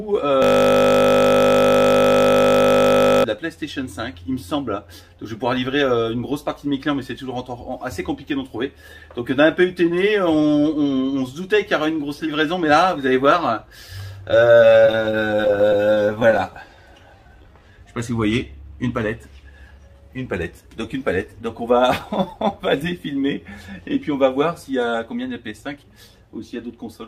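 From 0.42 to 3.24 s a system hang loop takes over. The driver froze while the hardware kept replaying one 20 ms stretch of its ring buffer, so the sound becomes a steady 50 Hz buzz. Unlike a stutter, nothing new gets through: one fragment repeats exactly, again and again.

Between 14.73 and 16.40 s come repeated stalls (stutter). Packets arrived late dozens of times, the jitter buffer kept running dry, and the receiver stretched the last sound through each wait, the longest about 22 ms. Nothing is lost, but about 468 ms of filler, 28% of the span, makes the audio drag and catch. The sound does move forward, which tells it apart from a loop.

From 17.16 to 17.72 s a jitter buffer slow-down plays the audio at 85% speed. To rebuild its reserve, the receiver repeated pitch periods and bits of pauses, adding 92 ms. Pitch stays the same while sounds draw out, a smooth stretch instead of choppy catches.

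Jitter buffer speed-ups follow at 19.71–20.18 s, running at 115% with around 70 ms cut, and at 25.51–25.84 s, running at 112% with around 50 ms cut. An overfull buffer was trimmed by removing short pitch-period pieces, so the audio sounds hurried at an unchanged pitch, the reverse of the earlier slow-down.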